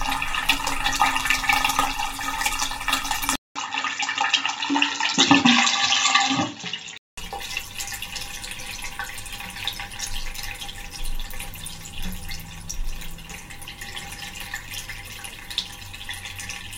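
The input likely switched to a poorer device between 3.36 and 7.18 s in this recording of sounds: after a 200 ms gap, nothing above 7.6 kHz survives, leaving the sound dull, with a faint new noise floor at roughly unchanged level.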